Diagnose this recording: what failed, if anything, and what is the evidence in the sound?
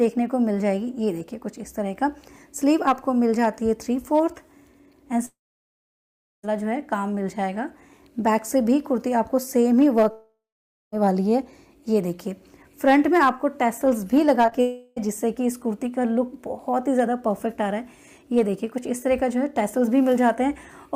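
The network stage failed, with a long network dropout in three places. At 5.25 to 6.45 s about 1.2 s of audio is lost. The last sound carries on briefly as a fading buzz or hiss, then about 1.1 s of silence follows. At 10.11 to 10.94 s about 0.82 s is missing, with roughly 0.55 s of silence. At 14.61 to 14.98 s about 0.36 s is replaced entirely by the fading continuation, with no silence. Each time the audio resumes further on, with the lost part skipped. This is likely a stall in packet delivery.

Just before that, there is short concealed packet loss. It is two back-to-back gaps of about 20 ms each, at 14.46 to 14.49 s and 14.49 to 14.53 s. The decoder got no data for them in time. It filled each hole by extending the preceding sound, then blended back into real audio. The result is a brief smear about 70 ms long. It is a small wobble right before the third dropout hits.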